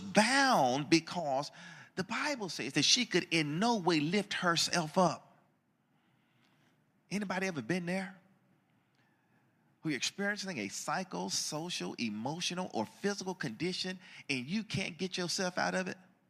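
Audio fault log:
1.20–2.73 s, one channel drops out: the speech level falls abruptly by about 6 dB for about 1.5 s, then recovers just before "that she could in". The likely cause is one stereo channel going silent, which halves the shared signal in the mono sum.
5.08 s to the end, one channel drops out: right after "no way lift herself" the same drop of about 6 dB returns and persists to the end of the clip, likely from the same loss of one channel.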